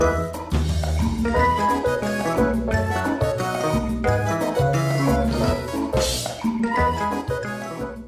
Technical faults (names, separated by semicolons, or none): none